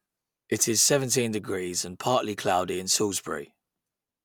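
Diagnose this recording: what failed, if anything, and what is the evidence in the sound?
Nothing in the signal chain failed: the speech recording shows no audible defect at any point.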